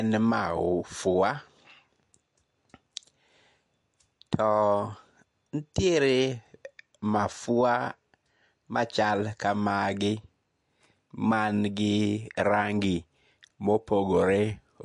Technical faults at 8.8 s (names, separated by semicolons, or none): MP3 compression